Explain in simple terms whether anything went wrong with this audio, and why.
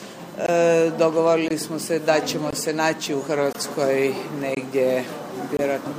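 Two things went wrong. A USB whine runs through the whole recording: a faint, steady high-pitched tone at 1 kHz, loudest at 4 kHz. Electrical noise from the USB connection leaked into the audio. Mains hum is a low buzz, but this stays high and fixed in pitch.

There is also a gap between chunks. The audio arrived in one-second pieces, and a silent hole about 21 ms long sits at each join: 0.46, 1.48, 2.51, 3.53, 4.55 and 5.57 s. These differ from random dropouts because they are evenly spaced and have clean edges.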